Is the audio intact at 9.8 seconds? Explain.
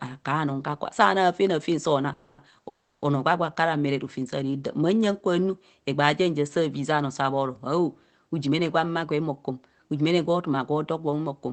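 No. From 8.46 to 10.30 s a jitter buffer speed-up trimmed repeated pitch-period slices from overfilled buffered audio, so speech runs 6% faster and sounds hurried, pitch unchanged.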